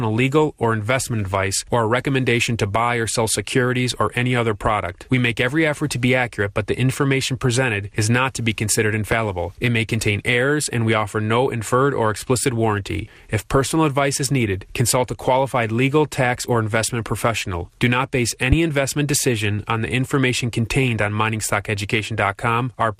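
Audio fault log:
throughout  MP2 compression: The speech sounds dull and carries a steady granular, gurgling roughness, plainly audible across the whole clip. This points to MP2 coding at about 80 kbps, likely starving the upper sub-bands of bits. Unlike burbling, the damage is constant rather than bursting.
9.12–9.15, 18.52–18.55  loud pop: Two single sharp pops, each about 25 ms long and roughly 15 dB above the speech, which continues underneath. Likely a voltage step from a switch, plug or static discharge. A pop is one broadband click, not a squelchy, pitched flutter.
20.83–21.02  DAB burbling: A burst of burbling lasting about 0.19 s, as short blips of noise hit individual sub-bands over several consecutive codec frames. Bit errors slipping past error correction corrupt samples and scale factors. It is brief and lurching, unlike the steady MP2 coding roughness.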